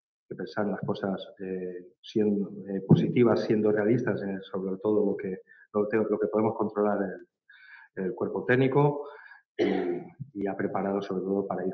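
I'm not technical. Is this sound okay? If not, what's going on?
Yes, nothing stood out on listening, and the slightly thin, phone-like quality comes from the ordinary microphone processing that calls use.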